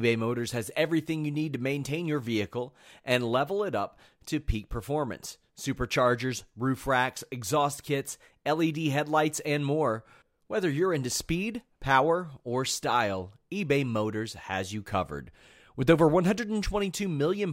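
Nothing in this recording trips a technical fault, so there's nothing here to flag.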